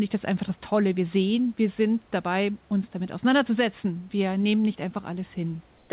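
From 5.78 to 5.9 s the background turns flat and featureless, about 2 dB quieter, likely comfort noise in place of the background while sending paused.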